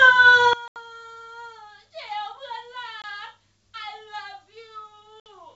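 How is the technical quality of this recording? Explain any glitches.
The quality is poor: from about 0.53 s the speech collapses in level, and three dropouts break it further, though the G.722 wideband coding keeps the remaining sound clear into the upper band.

One channel inverted: from 0.53 s to the end, one stereo channel has likely had its polarity flipped. When the two channels are summed to mono, the shared centre content cancels. The level falls by about 21 dB, leaving only a faint residue of the speech.

Packet loss on an ADPCM call: at 0.68–0.77 s (80 ms lost, a few packets), 3.02–3.05 s (20 ms, about one packet) and 5.20–5.31 s (60 ms), missing packets were replaced by silence. The decoder's predictor then drifted from the sender's, so each hard-edged gap ends with slightly distorted speech before recovering.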